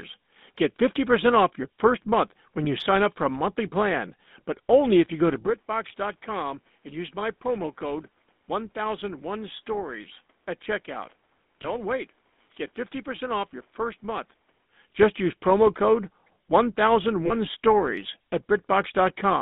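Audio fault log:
Throughout: GSM full-rate codec. The speech has the buzzy, gravelly roughness of the original GSM coder. It models the vocal tract and drives it with sparse, evenly spaced pulses, so fine detail in the excitation is lost. Here the line passes roughly 200 Hz to 3.7 kHz. Nothing brighter survives. At 13 kbps the coding damage is plainly audible.
2.64 s, 11.62 to 11.67 s, 17.26 to 17.34 s: lost GSM frames. Each gap is filled by repeating the last good frame's settings. The first two are single 20 ms losses. The last spans two frames, about 40 ms. Each is heard as a brief rough, metallic ring where the sound is held rather than dropped. The losses are short enough that the ring gives way to normal speech before any fade to silence.
5.47 to 14.65 s: input switched to a poorer device. The sound turns duller and boxier at once, with no gap at either switch. Nothing above 3.8 kHz comes through in this stretch. 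The level falls by about 10 dB, and a new noise floor appears, about 40 dB below the speech. The likely cause is the input changing mid-recording to another microphone or a headset's call profile, then switching back at 14.65 s.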